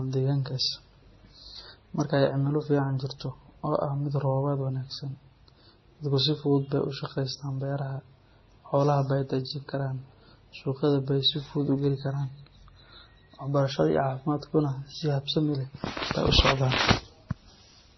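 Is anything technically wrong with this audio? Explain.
Yes, there are two faults.

Throughout the speech, nothing is heard above 5.9 kHz, and the dull, swirly smearing of low-bitrate MP3 mixes with a different watery warble. That pairing points to transcoding between lossy codecs, likely low-bitrate MP3, Vorbis and MP3 again, each re-encoding the last one's damage. A single pass would show only one kind of artefact.

At 2.00 s, a sharp snap sits on top of the speech without interrupting it. This is an electrical switching spike, likely a nearby arc picked up by the line. Unlike a dropout or an edit click, the underlying sound carries on unbroken.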